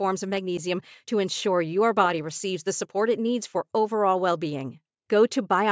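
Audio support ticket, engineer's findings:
No faults found on listening; the speech comes through with no audible defects and nothing to attribute to any component in the chain.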